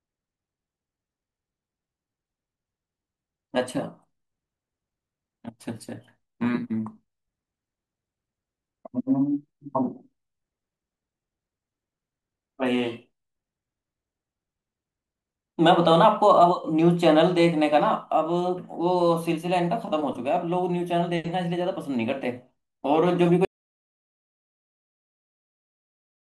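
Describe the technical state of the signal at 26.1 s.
At 26.1 s the signal is silence, part of an audio dropout to silence that begins at 23.45 s and runs to the end of the clip. The speech cuts off abruptly with no room tone behind it, which points to a likely input loss while the recorder kept writing silence.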